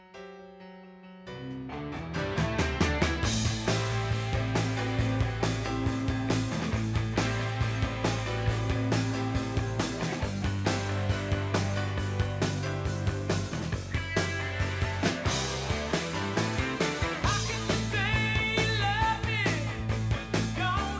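No technical faults can be heard anywhere here.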